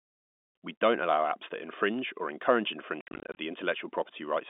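From 3.01 to 3.37 s, just after "that infringe or encourage", the speech breaks up with packet loss filled with silence. About 220 ms drops out across 360 ms in gaps up to 60 ms, which fits 10 ms packets. Each hard-edged hole sits against the G.711 telephone band.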